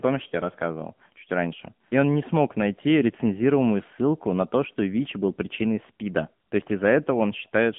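Speech runs through AMR narrowband mobile codec damage from start to finish. The band is held to roughly 150 Hz to 3.5 kHz, with nothing above 3.5 kHz. The codec rebuilds the voice from a vocal-tract model fed by a few pulses per short subframe. The artefacts are plainly audible, a buzzy, synthetic edge on the voice. That points to a low AMR-NB mode, which fits a rate near 7.95 kbit/s.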